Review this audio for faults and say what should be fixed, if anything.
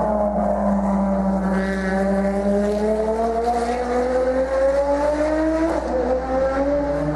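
Mains hum runs through the whole clip as a steady 60 Hz tone with low harmonics, sitting only around 15 dB below the wanted signal. Power-line energy is coupling into the audio path, typical of a ground loop or a nearby transformer. To prevent it, break ground loops with balanced connections or isolation and keep cables away from power supplies.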